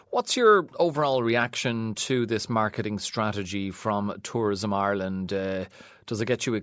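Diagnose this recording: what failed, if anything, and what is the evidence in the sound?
Nothing failed: the speech has passed through ordinary call microphone processing, with the lowest bass trimmed by its high-pass filter and no content above 8 kHz, all of which is expected for that path.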